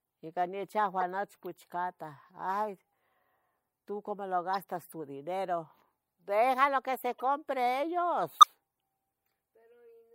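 Corrupt frame decoded at 1.00–1.03, 4.53–4.63, 7.14–7.22 and 8.40–8.45 s: damaged compressed frames were played anyway, misplacing energy into brief squeaky bursts, loudest near 8.4 s.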